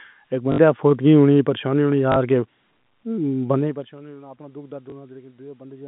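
Telephone-band speech, limited to roughly 150 Hz to 3.6 kHz by G.711 A-law coding, has two kinds of fault. Packet loss with last packet repeated causes short robotic stutters at 0.52–0.58 s and 2.12–2.16 s and a small blip at 4.90–4.92 s. These last 60, 40 and 20 ms, which fits one to three lost 20 ms packets replayed. From 3.52 to 3.97 s, zipper noise ticks over the audio as the level drops by roughly 20 dB in unsmoothed 1 dB steps, at around fifty a second.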